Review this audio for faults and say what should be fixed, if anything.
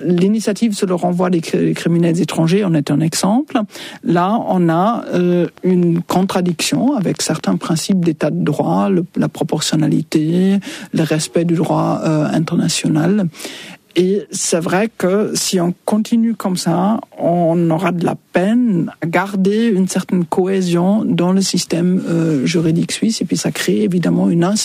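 A steady ticking runs from 5.33 to 8.05 s: a train of clicks, about twenty near-identical pops at a regular 7.7 per second, peaking roughly 5 dB above the surrounding sound. The evenly timed, matching pulses point to a likely cause in electrical interference from nearby equipment or a faulty connection or power supply. To prevent it, keep cables and the interface away from noisy devices and check that the interface is stable and properly grounded.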